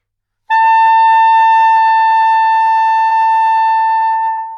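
At 3.05 to 3.13 s and again at 4.33 to 4.39 s, a burst of packet loss occurs. About 50 ms of concealment then holds and fades the last sound, smearing it across each spectrogram gap, before audio resumes about 60 ms, then 40 ms, further on, leaving a waveform discontinuity.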